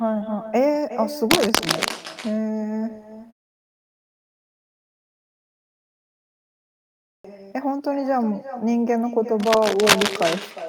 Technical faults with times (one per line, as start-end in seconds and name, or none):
0.00-10.68 echo with no canceller
1.30-1.91 cable scratch noise
6.67-7.24 clipped start after a pause
9.39-10.33 cable scratch noise